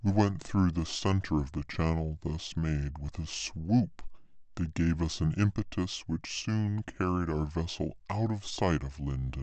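From start to finish the speech runs at about 0.73 times its proper speed and sits about 5.5 semitones low, the signature of a wrong sample rate. Samples are clocked out slower than captured, with no conversion, which fits 44.1 kHz audio played at 32 kHz.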